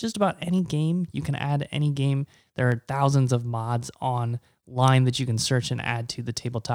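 Sharp single clicks occur at 0.59, 1.88 and 2.72 s. Each is likely dropped samples: a fraction of a millisecond vanishes, so the waveform jumps abruptly.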